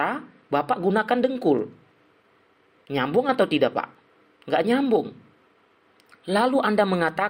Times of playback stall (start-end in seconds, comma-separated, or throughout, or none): none